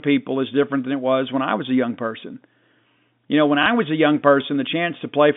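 Between 3.63 and 3.66 s, right after "know when" and before "was a young", there is packet loss with the last packet repeated. About 30 ms of audio went missing, consistent with a single lost packet, and the receiver refilled the gap by replaying the preceding chunk. The single repeat comes across as a small blip in the band-limited G.711 telephone audio.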